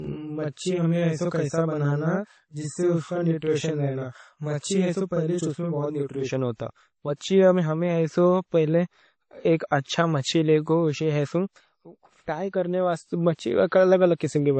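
Transcoding between lossy codecs, throughout: smeared, swirly coding artefacts from two codecs layer together, likely an MP3 at 32 kbit/s re-encoded as WMA at 48 kbit/s, the second codec compounding the first's damage.

Channel delay (doubling), 0.0 to 6.30 s: one channel arrives about 42.7 ms late, which fits a 2048-sample buffer at 48 kHz, and the mono sum gives equal-level doubling, almost a slap echo.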